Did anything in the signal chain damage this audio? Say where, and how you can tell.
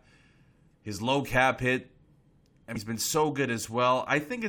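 Yes. At 2.75 s, just before "been so", there is a brief glitch lasting roughly 20 milliseconds that cuts across the speech. This points to damaged data in a compressed stream, a fault at the codec or storage stage. Some bytes in the encoded file were corrupted, so the decoder misread a frame, lost its place in the stream and had to search for the next valid frame header, producing that short glitch before the speech resumed.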